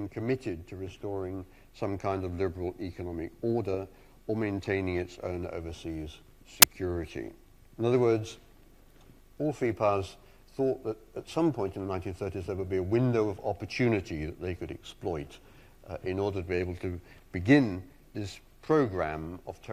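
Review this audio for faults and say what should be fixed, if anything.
A hard-edged burst of very loud white noise at 6.62 s is file tags played as audio: the compressed bytes of an embedded cover picture were decoded as samples.

To fix it, have the decoder skip tag and picture blocks rather than reading everything after the header as audio data.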